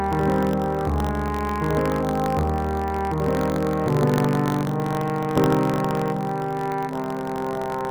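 Buffer tearing runs the whole way through: a steady robotic buzz at about 46.9 Hz whenever there's signal, which fits a 1024-sample buffer. The writer and reader have slipped, so a sliver of each period replays audio from roughly 70 ms earlier.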